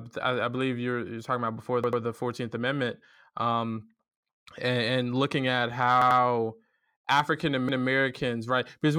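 Repeated frames occur where the same compressed data was delivered more than once, so the decoder replays a stretch it has already played. At 1.84 s, after "you're talking about before", and at 6.02 s, after "and and looking at", a 93 ms block plays three times. At 7.69 s, a 186 ms block plays twice. Each fault is heard as a brief stutter, and each adds 0.19 s to the sound.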